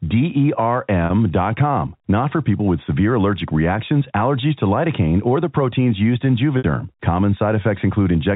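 Packet loss with pitch repetition strikes twice, at 1.06 to 1.10 s and 6.58 to 6.64 s. About 40 ms and then 60 ms of audio went missing, which fits two and three 20 ms packets. The receiver bridged each gap by repeating the last pitch period and fading it over about 50 ms. The first sounds like a brief held, buzzy tone. The second outlasts that fade, so it dies away before the speech returns with a short cross-fade.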